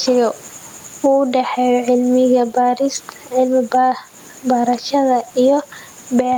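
Gain pumping runs through the whole speech clip, with the gain swinging by roughly 10 dB. The likely cause is microphone gain set far too high, with a fast limiter pulling it down on peaks and squashing the dynamics. The room noise sits about 38 dB below the speech.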